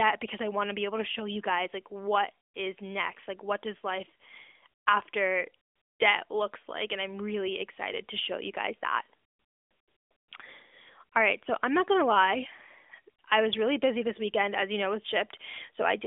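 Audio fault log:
No faults detected.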